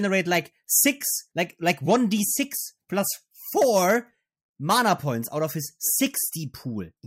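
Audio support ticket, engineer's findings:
Listened through the speech recording and found no issues to log, so this ticket can be closed from the audio side.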